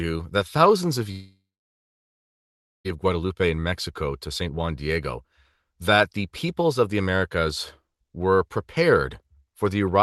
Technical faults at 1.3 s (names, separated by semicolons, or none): long network dropout